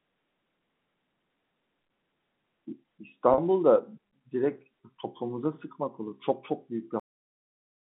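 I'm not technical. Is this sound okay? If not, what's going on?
No, there are two faults. At 3.34 to 3.38 s there is packet loss with pitch repetition: about 40 ms of audio went missing, which points to a couple of lost network packets. The receiver filled the gap by repeating the last stretch of pitch, so it sounds like a brief held, buzzy wobble.

The second is a cut-off end. At 7.00 s the audio stops mid-sound and drops straight to dead silence, with no natural fade, because the final chunks of audio were never played out. The narrow, phone-like sound throughout comes from ordinary telephone coding.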